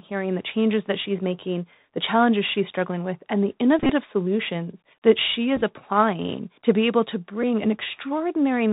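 From the start, the whole speech track runs through the Bluetooth CVSD headset codec, the one-bit 64 kbps delta scheme. Nothing above 4 kHz survives, s sounds come out scratchy, and a grainy hiss sits underneath everything.

From 3.79 to 3.89 s, between "struggling with and the" and "solutions that she", you get Bluetooth headset packet repeats. Lost packets were filled by re-decoding the previous one, so there's a buzz near 267 Hz, with the longest stretch about 30 ms. It happens again from 5.55 to 5.63 s, before "applying to be able", in shorter bursts. At 7.43 s, after "to be able to", it's just a small tick.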